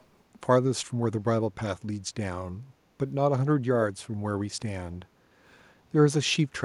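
Speech, with an echo leak from 0.00 to 0.04 s. A very faint copy trails the voice by 285 ms. Likely, an echo canceller at a loudspeaker end missed it.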